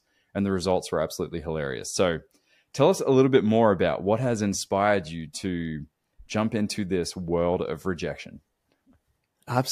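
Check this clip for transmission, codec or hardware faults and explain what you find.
Nothing to report; no transmission, codec or hardware fault is audible anywhere in the speech.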